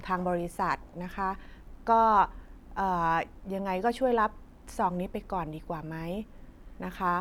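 No technical faults are audible anywhere in this speech recording.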